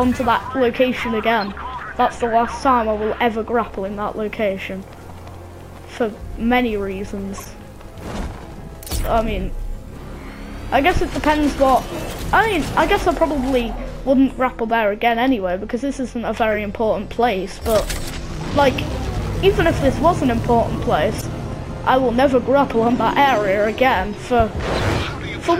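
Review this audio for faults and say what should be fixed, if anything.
Corrupt frame decoded: flipped bits in compressed frames were decoded anyway. The misread gains and codes put energy at the wrong frequencies, which is heard as brief chirps and noise bursts at 1.41–1.51, 7.37–7.46, 16.52–16.56, 21.18–21.24, 22.71–22.73 and 24.74–24.84 s. The last burst is the loudest. Checking each frame's integrity and concealing or dropping damaged frames instead of decoding them would prevent this.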